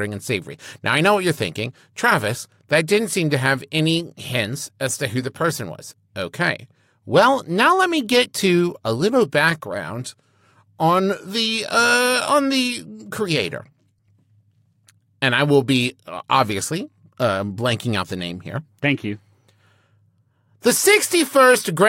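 No technical faults can be heard anywhere in this speech recording. There is no moment that needs a time stamp or a closer listen.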